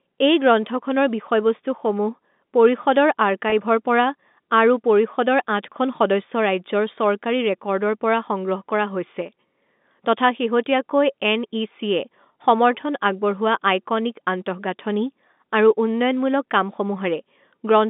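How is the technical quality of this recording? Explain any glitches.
One glitch stands out, at 3.50 to 3.52 s, heard against the narrow telephone band of the G.711 telephone coding. There, packet loss with pitch repetition occurs: 20 ms of audio went missing, which fits a single lost packet, and the receiver bridged it by repeating the last pitch period. With so short a gap, it sounds like a brief held, slightly buzzy moment, not a dropout.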